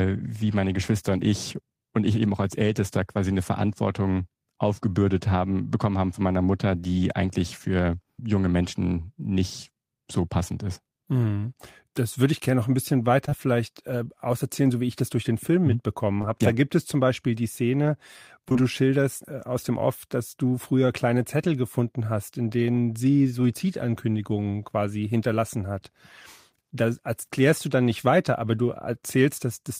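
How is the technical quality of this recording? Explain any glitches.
The recording has a few short dropouts, all of the same kind: short concealed packet loss. At 13.25 to 13.33 s, right after "gerne noch ein bisschen", two back-to-back gaps of about 20 ms each went missing. At 16.21 to 16.28 s there's another pair. At 18.49 to 18.62 s, with a second loss at 18.53 to 18.57 s, just before "schilderst äh aus dem", there's a third cluster. In each case the receiver patched the hole by extending the preceding sound and then blending back in, so you hear a quick smear or wobble.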